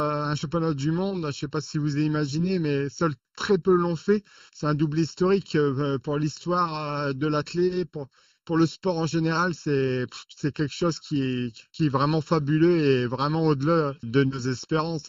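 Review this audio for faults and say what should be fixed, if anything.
Channel delay (comb filtering) runs throughout: one channel lags by under a millisecond, so the mono sum cancels at evenly spaced frequencies starting around 700 Hz, giving a hollow, static tone unlike a sweeping phaser.

Align the channels before any mono fold-down, or check the summed output against each channel so a small offset is caught before mixing.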